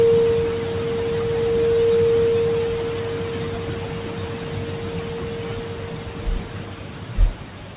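No technical faults can be heard anywhere here.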